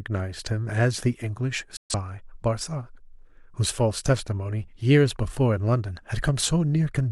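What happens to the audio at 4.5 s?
Nothing goes wrong at 4.5 s: the speech carries on intact through that moment, with no dropout, click, glitch or other fault.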